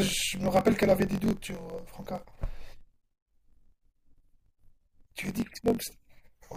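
From start to finish there's a block size mismatch (truncated): each block's tail gets dropped, giving a 45.9 Hz buzz that fits 1024-sample writes, with the speech running 1.07 times fast at normal pitch.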